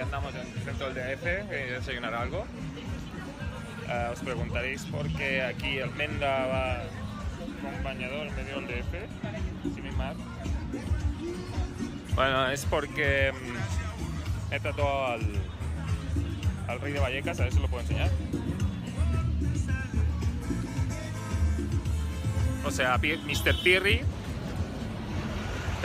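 No technical faults can be heard anywhere in this audio.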